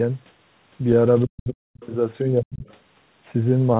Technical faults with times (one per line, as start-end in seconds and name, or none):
1.25-1.82 speech suppressed in double talk
1.74-1.87 other side's voice leaking through
2.24-2.65 speech suppressed in double talk
2.66-2.74 other side's voice leaking through